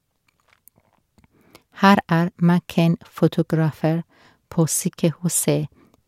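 Speech recording with no technical faults to report at any point in the clip.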